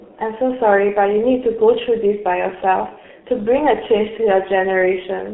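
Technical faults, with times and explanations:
Throughout, G.723.1 codec. The speech is confined to roughly 200 Hz to 3.5 kHz, so it sounds muffled. Coarse 30 ms frames and a slowly updated voice model, which fits a rate near 6 kbit/s, leave it hoarse, with consonants heavily smeared.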